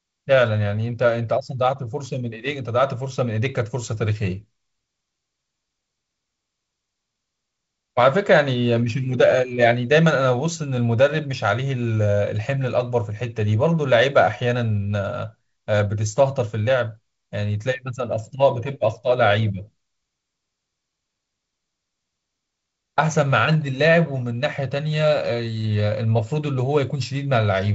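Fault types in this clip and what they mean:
No faults can be heard in the speech. The sound stops near 7.7 kHz, with the light hiss and slight graininess of wideband telephone coding, which fits G.722 at 48 kbit/s.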